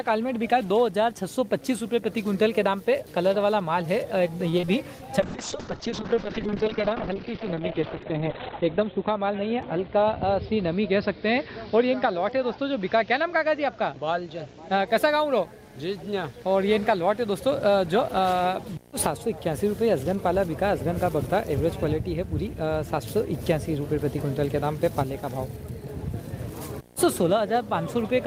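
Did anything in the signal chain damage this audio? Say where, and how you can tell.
Yes. In the analogue wiring, video or display buzz runs throughout: a 60 Hz field-rate buzz with hash above it, about 25 dB below the signal, from a video cable coupling in.

On the network path, repeated packet loss from 4.49 to 4.69 s gives robotic, choppy sound: four gaps, longest 37 ms, patched by stretching previous sound over 43% of the span.

In call processing, a call bitrate drop from 5.20 to 14.93 s sounds rough and muffled. The encoder fell from 40 to 9 kbps and bandwidth from 20 kHz to 4 kHz, bottoming for 3.41 s.

In the receive buffer, a jitter buffer speed-up from 9.33 to 9.96 s runs the audio about 6% fast at unchanged pitch. Roughly 40 ms of pitch periods were trimmed to cut delay.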